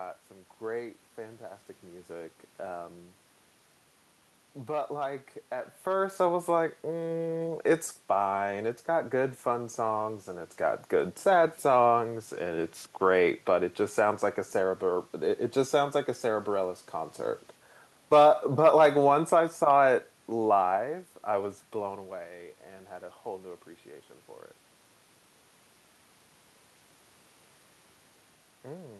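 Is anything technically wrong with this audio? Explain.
No, nothing here points to a system problem: the background is room noise picked up at the microphone, and the level shifts around 5 s and again near 22 s come from the talker moving relative to the mic.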